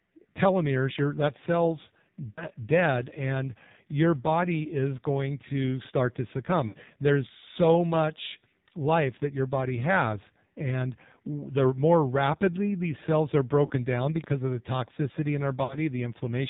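AMR narrowband mobile codec, throughout: the speech is band-limited to nothing above 4 kHz and has the heavy buzzy, synthetic quality of a vocal-tract model fed by sparse pulses, which fits a low AMR-NB mode around 5.9 kbps.

Lost AMR speech frames, at 2.32 to 2.47 s, 6.68 to 6.77 s, 13.66 to 13.72 s and 15.64 to 15.77 s: the decoder stretched the last good pitch and vocal-tract settings with falling gain over gaps of 40 to 60 ms, giving brief warbling dips, after "telomeres you that cell's", "going to start to" and "of the toxicity in", with the voice returning weak or rough for a moment.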